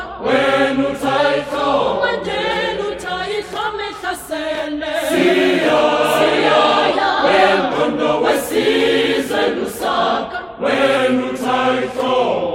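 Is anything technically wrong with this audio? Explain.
Yes. The playback rate jumps three times. From 1.18 to 2.26 s and from 6.93 to 7.60 s, the sound runs about 6.2% fast and sits about 105 cents sharp, roughly a semitone. It then snaps back. From 10.97 s to the end it runs 6.2% slow, about 111 cents flat. Speed and pitch move together, which points to a drift correction step. Clock-matching software likely changed the rate in one step to refill or drain its buffer.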